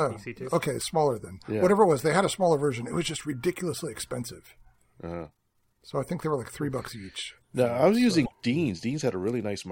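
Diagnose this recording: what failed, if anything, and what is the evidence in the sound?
A broken MP3 bit reservoir, at the codec stage, is the likely cause of the disturbance from 8.24 to 8.33 s. For about 80 ms the speech jumps forward and the first moments after the jump come out garbled. MP3 frames here last about 26 ms, so this covers roughly three frames. After missing frames, a frame reaching back into the reservoir for its borrowed bits finds another frame's bytes and decodes them wrongly until the stream resynchronises.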